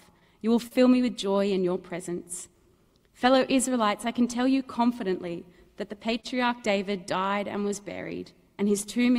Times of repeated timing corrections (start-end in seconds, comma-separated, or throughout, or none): 0.55-9.07